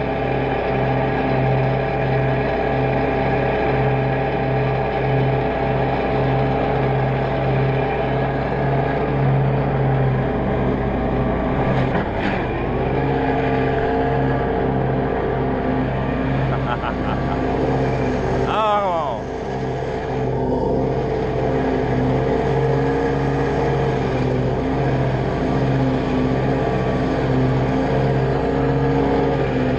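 No technical faults occur anywhere in the audio, so there is nothing to describe in time order.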